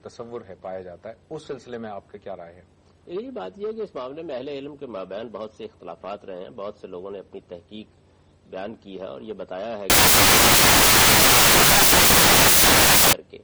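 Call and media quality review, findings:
Loud harsh broadband noise 9.90–13.13 s; samples built from the wrong bytes in the decoder/reader, misaligned or swapped byte order turning low bits into large values.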